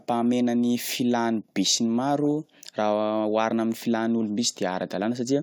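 No technical faults are audible anywhere in the speech.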